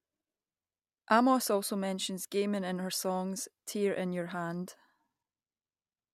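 No technical faults are audible.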